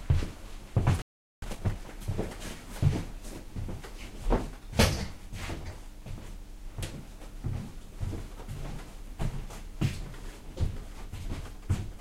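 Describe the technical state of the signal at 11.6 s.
At 11.6 s the audio is intact, with no technical fault present at that moment.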